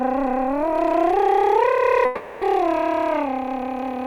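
A music clip with what is likely a long network dropout: from 2.05 to 2.44 s no packets reached the receiver, so it stretched the last sound into a fading buzzy smear lasting 0.36 s, without falling silent, before the music resumes with that stretch missing.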